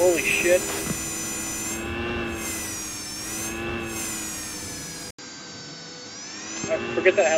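At 5.11 s the audio drops out for 80 ms, then turns duller, with nothing above 7.6 kHz and faint new background noise, likely an input switched to a poorer device.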